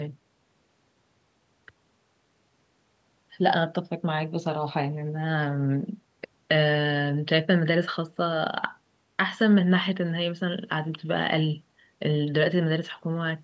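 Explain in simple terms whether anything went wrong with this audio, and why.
Nothing stood out on listening; the speech has the slightly thinned low end you'd expect from a call microphone, which is normal and not a fault.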